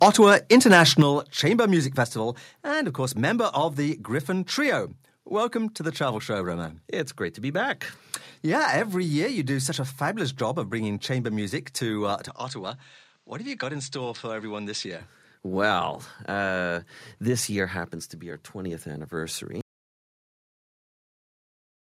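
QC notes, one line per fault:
0.02–1.02 s, microphone overload: the loudest syllables crack harshly, with peaks about 6 dB past the converter's limit and a small share of samples flattened, likely from input gain set too high.
1.02 s, microphone volume stepped down: the speech and background drop suddenly by about 7 dB right after the distorted opening, likely software cutting the input volume in one step.
12.28–15.01 s, input switched to a poorer device: just after "chamber music to uh" the sound turns duller, with a level about 5 dB lower and a new noise floor, likely a change to another microphone.
19.61 s to end, audio dropout to silence: the speech cuts out mid-flow into silence with no room tone, likely because the input was lost while the recorder kept writing silence.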